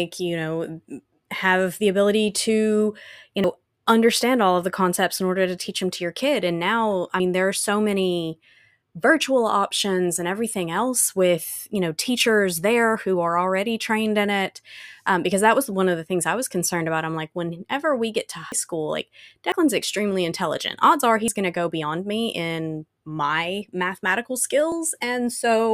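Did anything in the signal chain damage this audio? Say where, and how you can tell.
Yes, a dropped buffer (overrun), likely at the driver or buffer stage, discards short chunks of speech, so it jumps ahead at 3.44, 7.2, 18.52, 19.52, 21.28 and 24.72 s, each skip roughly 40 to 100 ms.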